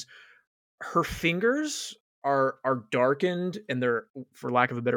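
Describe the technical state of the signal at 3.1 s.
At 3.1 s the audio is intact, with no fault to be heard at that moment.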